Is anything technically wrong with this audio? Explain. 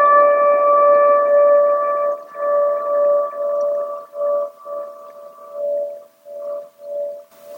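No, nothing technically wrong stood out on listening to this audio.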